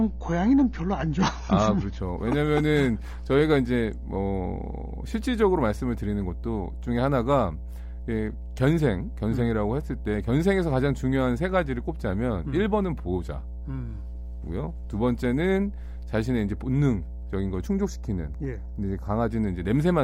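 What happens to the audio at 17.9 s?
At 17.9 s the speech falls inside a stretch of channel delay (comb filtering), from 17.67 to 19.29 s. One channel lags the other by a fraction of a millisecond, and summing them cancels evenly spaced frequencies. The first notch sits around 3 kHz, so the sound turns hollow and phasey.

Mains hum also runs under this moment. It is a steady 60 Hz tone that leaks in from the power line, through a ground loop or a nearby transformer. It is loud, only about 10 dB below the speech.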